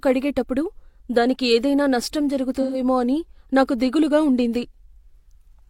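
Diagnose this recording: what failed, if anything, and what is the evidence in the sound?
The codec stage failed with AAC frame loss with concealment: from 2.61 to 2.80 s, after "కడిగేటప్పుడు దానికి ఏదైనా నష్టం" and before "అని నాకు దిగులుగా ఉండింది", the speech turns smeared and noisy. The decoder stretched the last good spectrum over a gap of about 128 ms, which fits three lost frames.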